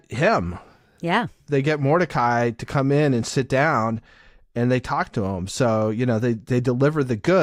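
Speech recording; no technical faults detected anywhere in the clip.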